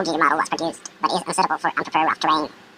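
From start to finish the speech runs twice as fast and an octave higher, giving a chipmunk-like sound. This is audio read two samples at a time (double speed): pairs of samples were taken as single frames, so any strong content above a quarter of the sample rate folds back.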